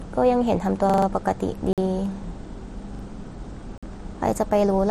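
At 0.90 to 1.07 s, there is a repeated buffer. New audio arrived late, so one 43 ms slice plays four extra times, which fits a 2048-sample buffer. It sounds like a stutter.

At 1.73 to 1.78 s, a gap between chunks leaves a 48 ms hole in the sound.

The repeated buffer returns at 2.95 to 3.04 s, with two extra plays.

Another 48 ms gap comes at 3.78 to 3.83 s. The two gaps fall 2 s apart, matching the chunk length.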